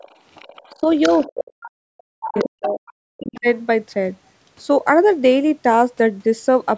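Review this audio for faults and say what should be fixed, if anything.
A second voice sits underneath the speech from 0.0 to 1.7 s, faint, around 20 dB below the talker. It returns from 2.22 to 3.41 s, louder this time, only about 10 dB down. This is the other side's voice leaking through. The likely cause is residual echo: the far end plays on a loudspeaker, the microphone picks it up, and the echo canceller leaves part of it in. Fix it with better echo cancellation, or use a headset.

The talker's own speech gets squashed in three places. At 0.73 to 0.85 s it dips by roughly 10 dB for a moment. From 1.31 to 2.79 s the damage is severe: for well over a second the speech falls away by around 40 dB. A brief dip of roughly 10 dB follows at 3.40 to 3.44 s. This is speech suppressed in double talk. Both sides were likely talking at once, and the canceller turned everything down. Fix it with a canceller that handles double talk, or with better acoustic isolation.

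The room sound drops out for a brief moment, around 50 ms, from 3.07 to 3.12 s. The dip goes about 40 dB deep, then the background returns. This is background gated by the echo canceller. While the loudspeaker was active, the canceller clamped the microphone hard and then released it. To prevent it, use gentler suppression or comfort noise so the room tone never vanishes.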